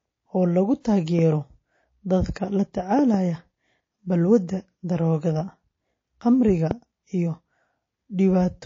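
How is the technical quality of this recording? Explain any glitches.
The recording has three audible problems: plainly audible compression damage throughout the speech, one pre-echo smear near the start, and five pops in three clusters.

MP3 compression is heard across the whole clip. The speech sounds watery and swirly, with dull treble and chirpy, metallic sibilants. This is likely a low-bitrate MP3 encode, and the plainly audible damage fits something around 32 kbps. At that rate the encoder cuts the high frequencies at a fixed point and drops weak spectral lines that flicker on and off from frame to frame, which produces the swirl.

Pre-echo occurs from 0.81 to 0.85 s. A short hiss rises about 17 dB above the quiet background and spreads 43 ms ahead of a sharp onset, so the attack sounds blurred. The codec spreads its quantisation noise evenly across a roughly 72 ms block. Because the onset lands late in that block, noise sized for the loud part also fills the silence before it. 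The encoder evidently never switched to short blocks, which would have confined that noise.

Loud pops occur as a double pop from 1.19 to 1.34 s, another double from 2.99 to 3.16 s, and a single pop from 6.71 to 6.73 s. The first four peak roughly 10 dB above the speech and the last somewhat higher, near 15 dB. Each is a sudden voltage step or pulse added to the signal, likely from a connector, switch, static discharge or driver glitch. The speech carries on underneath each thump.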